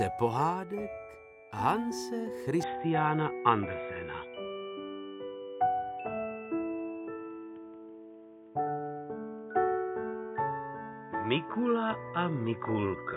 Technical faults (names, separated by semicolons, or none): input switched to a poorer device